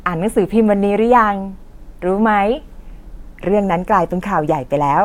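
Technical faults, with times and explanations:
No technical faults can be heard in this speech recording.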